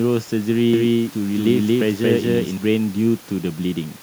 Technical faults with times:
0.73-2.57 doubled audio track

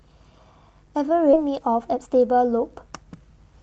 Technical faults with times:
1.33-1.35 skip ahead
1.44-3.52 jitter buffer speed-up

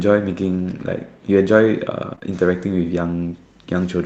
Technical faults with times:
2.15-2.23 short concealed packet loss

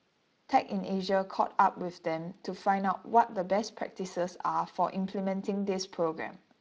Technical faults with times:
none

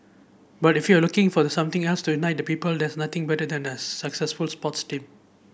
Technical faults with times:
none

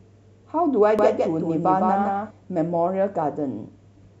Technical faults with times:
0.99-2.31 doubled audio track

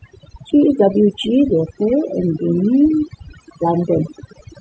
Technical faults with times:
0.00-4.61 overdone noise removal

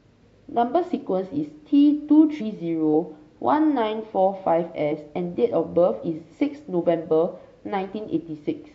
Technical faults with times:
2.40 compressed frames skipped
4.91 compressed frames skipped

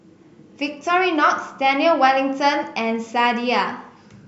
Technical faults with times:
none

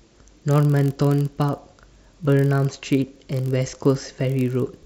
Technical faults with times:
0.00-4.85 block size mismatch (padded)

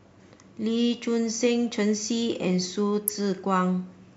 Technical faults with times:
3.08 corrupt frame decoded

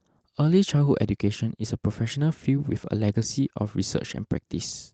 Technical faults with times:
0.00-4.94 clock drift between sender and receiver
0.20-4.94 repeated timing corrections

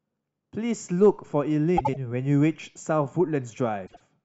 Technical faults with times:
1.77-1.96 frames out of order
3.86-4.01 frames out of order

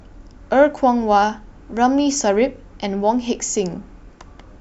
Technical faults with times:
none

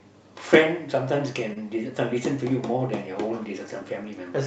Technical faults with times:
1.53-1.58 short stall from a late packet

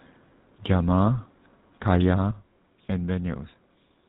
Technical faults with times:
0.00-4.09 GSM full-rate codec
2.31-4.09 sudden gain jump
2.54-2.56 lost GSM frames

